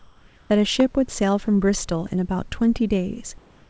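Speech carried over a call link whose band stops at 8 kHz, showing comfort noise in place of the background from 0.00 to 0.50 s and again from 3.38 s to the end at 3.70 s. The room's real noise gives way to a smooth, featureless hiss, about 2 dB quieter in the first stretch and at the same level in the second, which appears as an even, textureless band on a spectrogram and is likely the result of discontinuous transmission. A loud pop at 0.80 to 0.82 s peaks around 10 dB above the speech and shows as a narrow vertical spike in the waveform and a full-height stripe on the spectrogram, likely from an electrical or driver transient.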